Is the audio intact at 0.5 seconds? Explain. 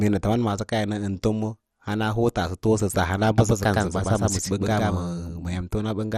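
No, at 0.5 s the speech has MP2 compression across the whole clip, likely from starved bits: upper sub-bands vanish above 14.9 kHz, leaving it dull and gurgly.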